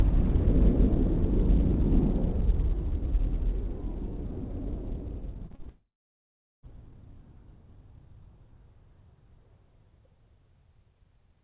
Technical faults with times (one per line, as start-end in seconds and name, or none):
5.46-5.67 repeated packet loss (robotic sound)
5.69-6.69 long network dropout